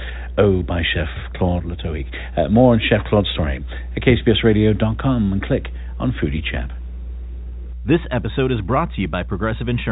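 Mains hum runs through the whole speech clip as a steady 60 Hz tone with low harmonics, sitting not far below the speech level. A ground loop or nearby transformer has coupled the power line into the signal, and the hum persists beneath the telephone-band audio, which stops near 3.8 kHz.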